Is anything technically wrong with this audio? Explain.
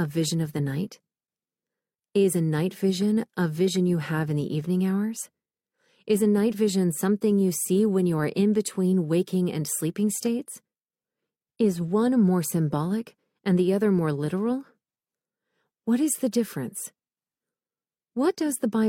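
No, the signal shows no technical faults anywhere in the recording.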